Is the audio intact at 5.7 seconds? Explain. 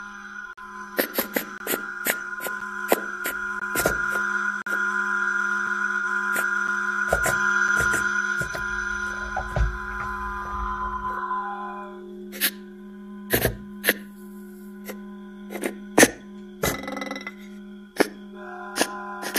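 No. At 5.67 s there is a gap between stream segments. The time stamps of two adjoining 1-second segments leave a 3.6 ms hole. The player fills it with silence. It sounds like a brief hard-edged dropout. No audio is lost.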